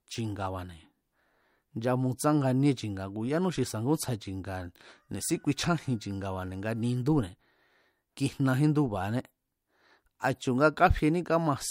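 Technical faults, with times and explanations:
No technical faults are audible.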